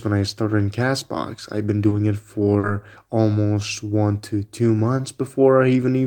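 At 1.89 s and again at 2.59 to 2.65 s, the speech shows short concealed packet loss. About 20 ms and then 40 ms of audio arrived too late to decode, and the receiver extrapolated from the preceding sound before blending back, which leaves a brief smear or wobble.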